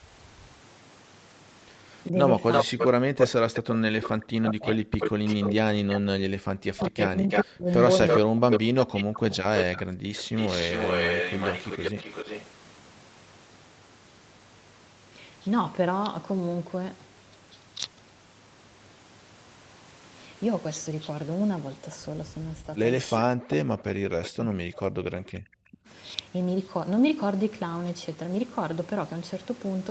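From 2.1 to 9.46 s the speech dips by roughly 40 dB, in pieces adding up to about 5 s, likely speech suppressed in double talk, with the echo canceller turning down the near talker along with the far-end echo. From 2.52 to 6.0 s and again from 6.85 to 12.46 s a copy of the speech returns 332 ms late at roughly the same level, likely echo leak from a loudspeaker side whose canceller left residual echo. From 9.85 to 10.14 s the room sound drops by about 40 dB for around 0.3 s as the echo canceller gates the background, then recovers. At 11.91 s the speech dips briefly by roughly 15 dB for about 50 ms, likely double-talk suppression again. Between 22.66 and 25.89 s the speech is cut by roughly 40 dB over about 2 s, likely the same suppression. At 24.23 s a faint echo about 15 dB below the speech appears 382 ms behind it, likely a short echo leak. Throughout, the call path limits the audio to 8 kHz.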